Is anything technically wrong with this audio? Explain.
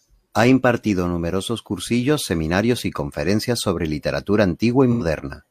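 Yes. At 4.92 to 5.02 s, just after "y conferencias sobre literatura", there is AAC frame loss with concealment. About 85 ms of the speech went missing, which fits two lost frames. The decoder filled the gap by reusing the last good spectrum, so the patch sounds smeared and noisy rather than silent. A plain dropout would leave a hard gap or click. Here the loss is too short to fade toward silence.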